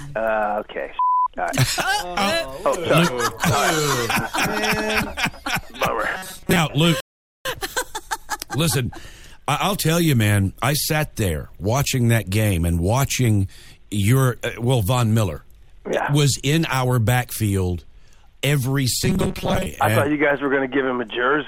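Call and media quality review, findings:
Robotic sound from repeated short buffers, 6.15–6.59 s and 19.03–19.66 s. Rigid metallic buzz at 188 Hz, fitting a loop of about 5.3 ms. Likely cause: late audio delivery, with the last buffer replayed, most of the first span and about half the second.

Rebuffering stall, 7.00–7.45 s. Silence, then playback resumes at the same point. Player buffer ran dry. Nothing lost, 0.45 s added.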